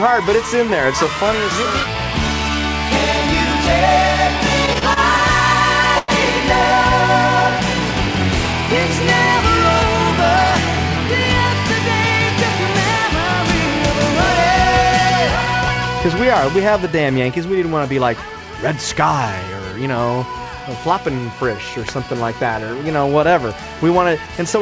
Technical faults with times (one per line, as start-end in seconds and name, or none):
4.66-4.98 repeated stalls (stutter)
5.98-6.10 short stall from a late packet